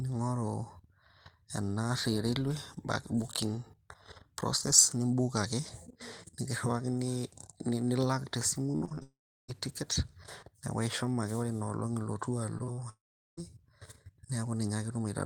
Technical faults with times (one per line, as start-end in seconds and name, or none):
8.71-9.02 repeated packet loss (robotic sound)
9.02-9.50 long network dropout
12.58-12.79 short concealed packet loss
12.89-13.39 long network dropout